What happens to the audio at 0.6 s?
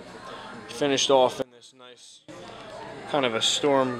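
Nothing goes wrong at 0.6 s; the audio plays through that moment intact, with no dropout, click or distortion.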